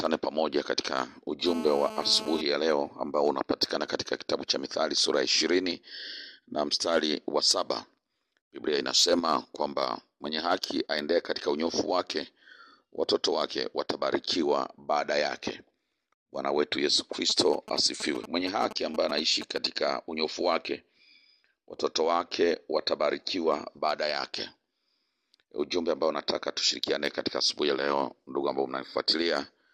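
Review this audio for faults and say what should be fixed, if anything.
From 1.46 to 2.41 s there is GSM phone buzz. A hard, raspy tone sits under the audio at about 217 Hz, rich in harmonics. It is about 11 dB below the signal. The pattern points to a 2G phone in an active call nearby. Its radio bursts arrive 217 times a second. The audio circuit rectifies them into this steady buzz. To prevent it, keep phones away from the recording chain or switch them to flight mode.

From 17.30 to 19.67 s there are GSM signalling bursts. Short 217 Hz buzzes come in a galloping dit-dit-dit rhythm. They sit roughly 10 dB below the signal. This is a nearby 2G phone sending only occasional bursts, as it does while exchanging signals with the network outside a call. The audio circuit rectifies each group into a short buzz. To prevent it, power phones off or use flight mode near the equipment.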